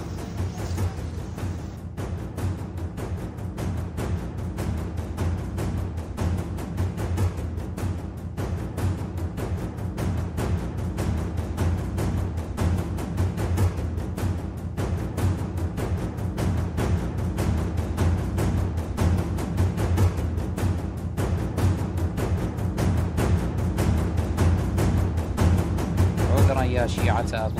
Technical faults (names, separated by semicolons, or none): none